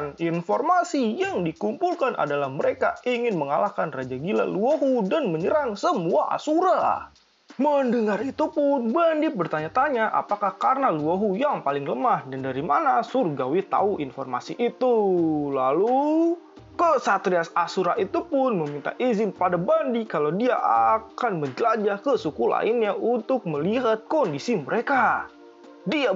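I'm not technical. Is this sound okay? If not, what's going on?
Yes, it's fine; nothing here sounds wrong.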